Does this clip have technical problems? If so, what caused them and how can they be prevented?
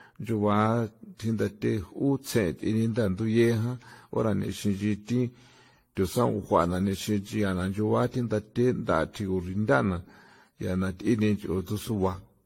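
Yes. Throughout the speech, the signal was likely passed through a lossy AAC-LC encoder again and again, around ten times, at a rate that sounds consistent with 64 kbit/s. This is generation loss: each re-encode quantises on a shifted frame grid, so noise and spectral gaps pile up. The result is swirly, hollow, smeared speech with softened consonant attacks, and nothing above 16.5 kHz. To prevent it, edit and store from a lossless master and encode only once at the final stage.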